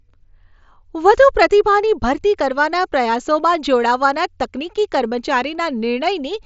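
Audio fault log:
No faults heard in this speech.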